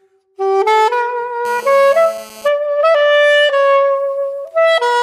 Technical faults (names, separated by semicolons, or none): GSM phone buzz